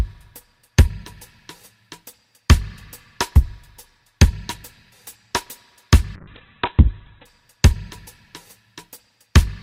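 Around 6.16 to 7.33 s there's a call bitrate drop. The sound goes rough and muffled, losing everything above 4 kHz, which fits the encoder falling from about 48 to 7 kbps.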